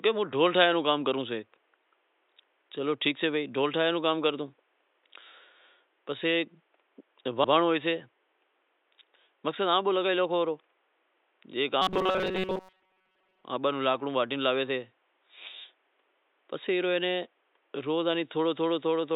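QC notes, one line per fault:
7.44 to 7.54 s, repeated frames: a block of about 96 ms is played twice in a row, a short stutter where the same fraction of a second comes back once. This fits three compressed frames being written or delivered a second time, and the clip runs 96 ms longer for it. Unlike the robotic buzz, the repeated stretch is long enough to be heard as recognisable sound, not as a tone.
11.82 to 13.44 s, robotic sound from repeated short buffers: for about 1.6 s the speech turns into a rigid, metallic buzz pitched near 188 Hz that still roughly traces the syllables. The cause is likely fresh audio arriving too seldom, so the playback fills the gaps by looping a tiny slice of about 5.3 ms, and that loop rate sets the fixed pitch. Roughly two thirds or more of the real audio is skipped. Repeated frames replay a whole chunk once, but this repeats a very short slice many times, so it is heard as a steady tone, not a stutter.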